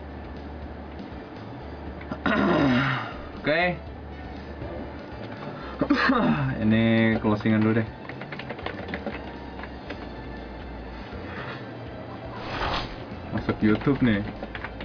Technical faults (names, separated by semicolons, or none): none